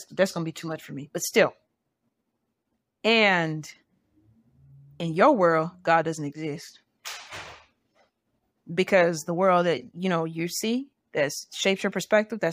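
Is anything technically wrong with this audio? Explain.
No, no technical faults detected.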